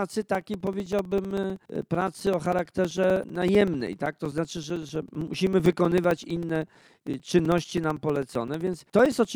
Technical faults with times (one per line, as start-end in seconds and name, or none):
0.09-9.25 periodic USB or driver dropouts